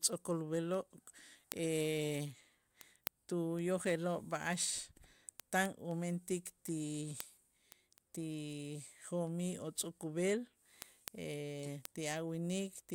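A steady train of sharp ticks of uneven strength runs through this speech recording from 0.23 s to 12.89 s, one roughly every third of a second, about fifty in all. These are word clock ticks. The receiving device runs on its own clock rather than locking to the sender's, and the two drift apart by something like 70 parts per million. Each time they slip past each other, one sample is dropped or repeated and a click lands in the audio.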